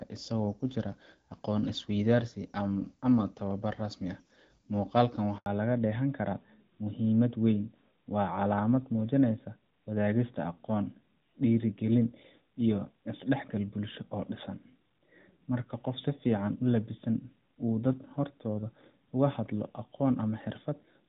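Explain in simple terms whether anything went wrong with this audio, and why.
Two things went wrong, both at the same moment.

At 5.38 s the speech cuts out for about 80 ms, until 5.46 s. This is a handover gap: the phone moved the call to another network, and nothing came through during the switch. Unlike crackly signal loss, it is one single clean silence.

From 5.46 s to the end, the voice sounds duller and more muffled, like an old landline. This is a fallback to narrowband: the call left HD Voice for an older phone codec, so everything above 4 kHz disappears. Before the gap, the HD Voice part sounds clear, with only light coding roughness. Unlike a brief glitch, this change never recovers.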